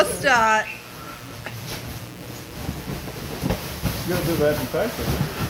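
A steady, raspy mains buzz runs through the whole audio, sitting roughly 20 dB below the signal. It is built on 60 Hz, with harmonics reaching into the kilohertz range, the signature of sharp switching spikes from a dimmer, rectifier or unshielded cable leaking in twice per mains cycle.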